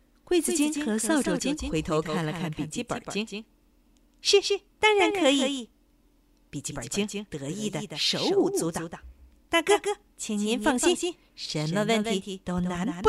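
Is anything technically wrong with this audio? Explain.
Yes. A doubled audio track runs through the whole speech clip: a second, full-band copy trails about 150 ms behind, roughly 5 dB quieter, with no decay. It's likely a second capture through a slower path. It sounds like a flat slapback echo, and the waveform and spectrogram show each onset repeated at that fixed offset.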